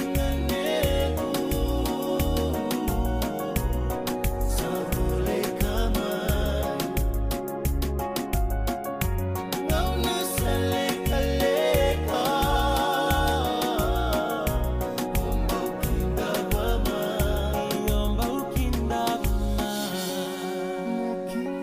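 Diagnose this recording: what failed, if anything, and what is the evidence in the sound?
Nothing in the recording points to a failure at any stage of the chain: the signal stays continuous and stable throughout, with no dropouts, discontinuities or level disturbances.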